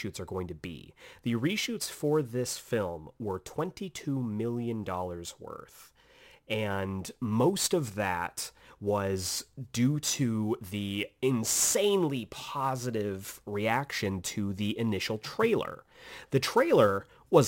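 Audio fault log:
Throughout, sample clock jitter. The converter's timing wanders by around 7 microseconds, so each sample lands slightly off time. Steep, fast-changing parts of the speech suffer most. A rough hiss rides about 20 dB below the speech and disappears in pauses.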